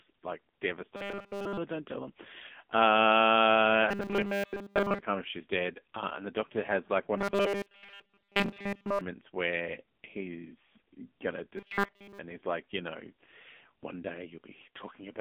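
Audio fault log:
throughout: AMR narrowband mobile codec. Nothing above about 3.5 kHz survives, and the low end thins below 200 Hz, so the sound sits in a narrow phone band up to 3.5 kHz. The codec damage is heavy. The speech takes on a buzzy, synthetic edge, because a simple vocal-tract model, driven by a few pulses per frame, rebuilds it from very few bits. That fits a low mode of about 6.7 kbps.
0.96–1.58 s, 3.89–5.02 s, 7.17–9.01 s, 11.58–12.19 s: robotic sound from repeated short buffers. The speech turns into a rigid metallic buzz at 200 Hz. The second burst ends just before "come if she's dead". The third runs from "doctor has like one" to "where he's gonna". The last runs from "where he's gonna" to "and he's like you". The likely cause is a 5 ms slice of audio looping while fresh audio is late. The repeats cover all of the first and last bursts and most of the middle two.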